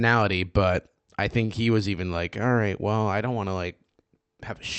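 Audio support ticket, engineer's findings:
Held, slightly buzzy sound at 1.45 to 1.52 s, with nothing lost. Short stall from a late packet: jitter buffer ran dry, receiver stretched the last sound for 36 ms, then resumed in place, leaving playback 36 ms later. Call path Opus, top end stops near 8 kHz.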